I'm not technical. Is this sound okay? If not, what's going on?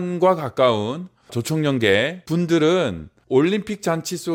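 Yes, nothing in this speech recording points to a technical problem.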